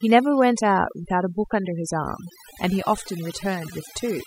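Overdone noise removal runs throughout: suppression set too aggressively gates bands near the noise estimate, leaving near-silent gaps with twinkling specks.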